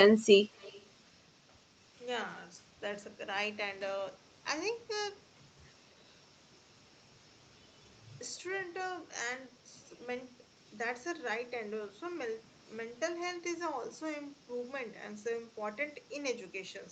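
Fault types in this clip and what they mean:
Echo leak: a faint delayed copy of the speech about 250 ms behind, well below the talker, from 0.55 to 0.87 s, likely residual from a loudspeaker echo canceller.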